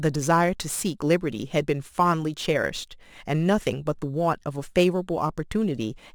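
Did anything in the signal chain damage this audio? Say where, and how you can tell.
Yes. Crude rate conversion at the sample-rate stage leaves a gritty, inharmonic fizz under the speech for the whole clip, roughly 25 dB down and tracking the louder, brighter sounds. That fits a 44.1 kHz to 48 kHz conversion that repeats the nearest sample without filtering.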